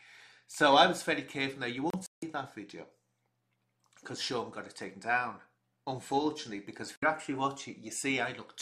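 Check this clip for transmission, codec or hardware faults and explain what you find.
Two digital broadcast dropouts. The receiver lost the signal or rejected corrupted frames and muted until good ones returned. From 1.90 to 2.23 s, about 190 ms of audio goes missing in holes scattered over 320 ms, the longest 160 ms. At 6.96 to 7.03 s, a single 64 ms gap follows. The audio that fell in both gaps is lost for good.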